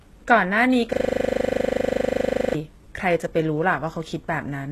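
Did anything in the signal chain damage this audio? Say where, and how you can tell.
Yes. From 0.93 to 2.55 s, one 40 ms slice of audio repeats 40 times in a row, producing a rapid mechanical stutter at 25 Hz instead of continuing speech. This is a system hang loop at the driver or buffer stage: the computer or its audio driver stalled, while the sound hardware kept replaying the same ring buffer, which points to a buffer about 40 ms long. The repetitions are exact copies, which separates this from a network dropout or a concealment artefact.

Throughout the clip, the codec damage is plainly audible, and nothing is present above 12.3 kHz. The likely cause is HE-AAC compression at the codec stage, at a low bitrate that points to around 16 kbps. This codec keeps only the lower spectrum and synthesises the treble by spectral band replication, copying lower bands upward under a coarse envelope. 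The rebuilt top end therefore isn't the original signal, and its harmonics don't line up with those below the crossover.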